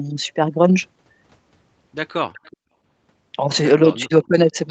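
From 2.33 to 2.57 s, and again briefly at 4.0 s, there is an echo leak: a faint copy of the speech arriving 372 ms late, around 30 dB below it. The likely cause is a far-end loudspeaker whose echo canceller let part of the pickup return. A spectrogram shows weak, smeared harmonics repeating earlier patterns.

From 4.06 to 4.55 s comes speech suppressed in double talk: with both sides active, the canceller likely turned down the near talker as well, dropping the level by up to about 25 dB across roughly 300 ms. The waveform dips, and the whole band up to the spectrogram's 8 kHz top edge drops in level.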